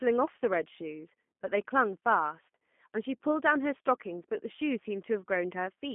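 Throughout the speech, G.729 codec damage is plainly audible. The sound is rebuilt from a vocal tract filter, a pitch predictor and sparse pulses, which fits an 8 kbit/s G.729A stream. The result is rough and synthetic, confined to a 200 Hz to 3.5 kHz line band with nothing above 3.6 kHz.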